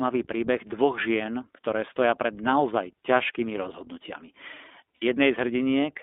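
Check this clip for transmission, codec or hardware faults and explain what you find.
Two faults are present: iLBC coding throughout, and a short packet loss near the end.

iLBC codec, whole clip: frame-by-frame narrowband coding, consistent with the 15.2 kbps, 20 ms mode, limits the line to 250 Hz–3.6 kHz, leaving speech plainly rough and synthetic.

Lost iLBC frames, 4.96–5.04 s: a 60 ms packet loss, consistent with three missing 20 ms frames, makes the decoder repeat the last pitch cycle with noise, producing a brief buzzy held vowel before speech recovers immediately.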